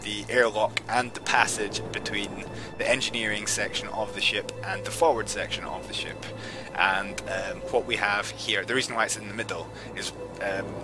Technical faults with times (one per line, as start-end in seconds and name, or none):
none